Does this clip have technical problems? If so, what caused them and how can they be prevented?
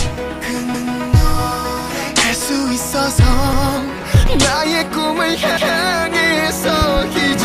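Yes. Three repeated buffers occur, at 0.74–0.93 s, 3.53–3.72 s and 5.57–5.76 s. At each point a stretch of about 186 ms plays a second time with a hard join, which is heard as a stutter. That length fits an 8192-sample buffer. New audio did not reach the output in time, so the device replayed the block it already held. Prevention: keep the audio thread unblocked and use a larger buffer to absorb scheduling delays.

Two loud pops occur as pairs of sharp transients riding over the continuing sound. The first pair is at 4.15–4.30 s, peaking about 5 dB above the signal. The second pair is at 6.82–7.01 s, about 10 dB above. The likely cause is a voltage step from a connector, a switch, static discharge or a driver glitch, which the downstream circuits shape into a thump. Prevention: secure cables, ground the equipment properly and avoid switching during capture.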